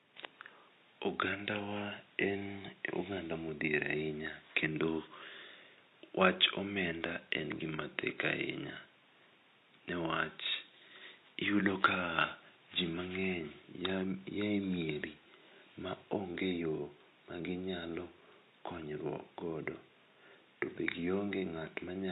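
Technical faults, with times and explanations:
Throughout, AAC compression: the speech sounds dull and smeared, with a swirling, fizzy texture on sibilants and held vowels, and the top of the spectrum is cut away. The likely cause is a lossy AAC-LC encode at a low bitrate, which fits roughly 32 kbps. The encoder quantises each frame's frequency lines coarsely, lowers the cut-off and leaves gaps that shift from frame to frame. The room noise sits about 40 dB below the speech.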